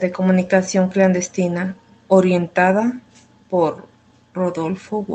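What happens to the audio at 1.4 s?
Nothing goes wrong at 1.4 s; the speech is intact there, carried through the call path with the same band-limited Opus coding it has throughout.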